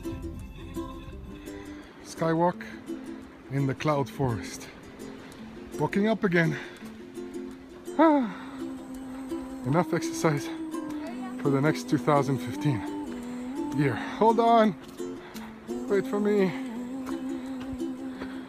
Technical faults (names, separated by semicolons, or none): none